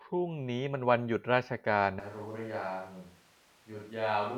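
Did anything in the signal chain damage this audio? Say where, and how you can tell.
Yes. At 2.00 s the microphone input stage likely drops the close mic and switches to a distant microphone. From there to the end, the speech turns abruptly roomy and hollow, thinner in the bass, about 10 dB quieter, with room noise only around 25 dB below it.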